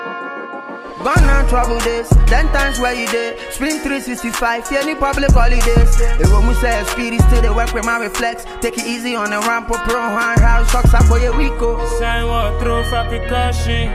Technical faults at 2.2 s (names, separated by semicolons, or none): none